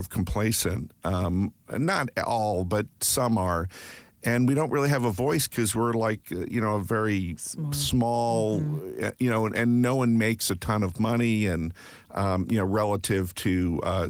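No faults detected anywhere in the speech recording.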